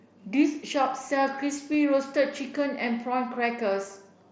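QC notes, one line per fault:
1.74 s, concealed Bluetooth headset packet loss: a single dropout of about 7.5 ms, which fits one lost packet. The receiver filled the gap by repeating the best-matching bit of the preceding waveform, so it's barely audible under the light mSBC graininess.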